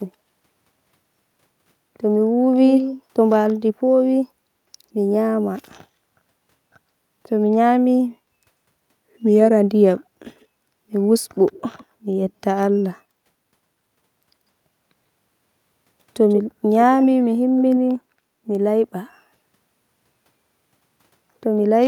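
Echo leak occurs at 2.75–3.02, 10.40–10.46, 11.52–11.85 and 16.29–16.42 s. The speech returns about 140 ms late, likely a loudspeaker pickup the far-end echo canceller missed. The echo is near speech level first, strong at 16.29 s and faint otherwise. On a spectrogram it shows as ghost contours shifted right.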